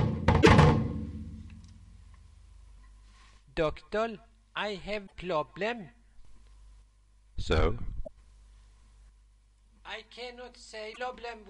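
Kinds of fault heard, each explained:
Damaged data in a compressed stream: corrupted bytes make the decoder misread frames and lose sync. Short blips occur at 0.38, 5.03, 8.03 and 10.91 s.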